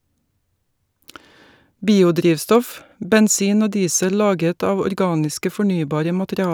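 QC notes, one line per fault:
No faults found in this recording.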